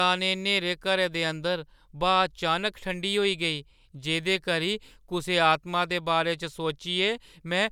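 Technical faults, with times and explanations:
No technical faults can be heard in this speech recording. There is nothing to mark at any point in the audio.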